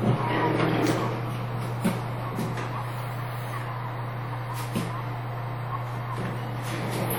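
Right through the audio there's a ringing, washy smear with a hiss that breathes along with the sound, most likely WMA compression at something like 48 kbps.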